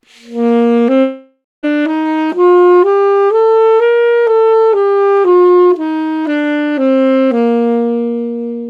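This clip of everyday sounds has a long network dropout from 1.01 s to 1.65 s. The sound does not just stop. The last moment is stretched into a fading buzz or hiss that fills about 0.61 s. Near the end of that fill there is about 0.18 s of near silence. The audio then resumes. About 0.62 s of the original sound is gone. The likely cause is a gap in packet delivery, masked by the receiver's concealment.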